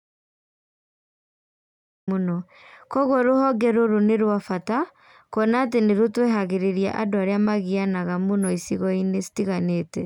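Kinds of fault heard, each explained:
Audio dropout to silence: the input was likely lost, through a disconnected device, failed link or stray mute, while the recorder kept writing silence. The clip opens already in silence, with no room tone, until the speech comes in mid-flow at 2.08 s.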